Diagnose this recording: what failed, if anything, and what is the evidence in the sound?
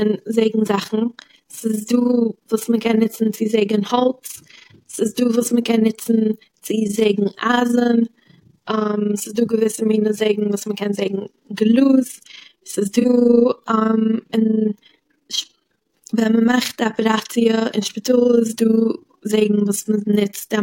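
The whole recording carries an overlap-add ripple, and it points to a frame-based processing stage. The level swings by about 11 dB around thirty times a second, so the speech has a fast, rough, robotic tremolo from start to finish. Something chopped the audio into windowed frames and stitched them back with an overlap whose windows don't add up to a flat gain. You get a dip at every frame seam, once per frame.

The second fault is a corrupt frame concealed by the AAC decoder, so this one sits at the codec stage. From 13.00 to 13.05 s the stream was damaged. The decoder spotted flipped bits and papered over the damage itself, muting or reusing a scrambled copy of the previous spectrum. Two frames were hit.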